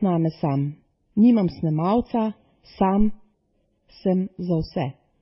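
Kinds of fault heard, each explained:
Channel delay (comb filtering): One channel arrives roughly 0.4 ms late, and the two are summed to mono. Shared content cancels at evenly spaced frequencies, with the first notch near 1.5 kHz. The speech sounds hollow and phasey for the whole clip.
Transcoding between lossy codecs: The speech carries a mix of different codec artefacts at once. Nothing is present above 5.6 kHz, so it sounds dull. This is likely several lossy codecs in series, ending in WMA, with the lowest cut-off surviving.
Phantom power thump: A deep thump runs from 3.00 to 3.18 s. It comes from a supply switching on a live input, and the voltage step passes through the coupling capacitors. Its low-frequency energy decays over about 39 ms.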